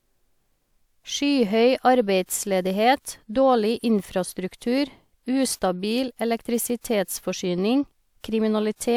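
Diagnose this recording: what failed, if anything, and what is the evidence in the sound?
Nothing failed: no stage in the chain, from wiring and conversion through to playback, leaves an audible mark anywhere in this speech recording.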